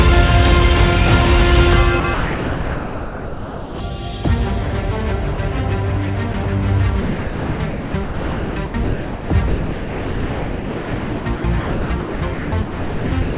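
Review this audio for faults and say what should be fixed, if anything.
The sender's voice detector most likely kept toggling between sending and muting, so the sound is chopped by the voice detector in three places. From 2.0 to 3.8 s, about 1.7 s of the sound is swapped for synthetic comfort noise in pieces, so it breaks up. The same chopping recurs briefly from 6.32 to 6.46 s, where about 40 ms is lost. From 7.02 s to the end, roughly 5.1 s is replaced in stretches. Across all three, the narrow band with nothing above 4 kHz points to a G.711-type call path.

At 5.34 to 5.38 s the detector likely judged a quiet moment to be background and stopped sending, so the sound is dropped by the voice detector. For about 40 ms the receiver fills in steady comfort noise, and the sound then returns as the detector triggers again. This short gap is heard as a tiny hole in the audio, not as choppiness.

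To prevent both faults, disable the sender's voice detection and discontinuous transmission, or lower its threshold and add hangover time so quiet passages keep being sent.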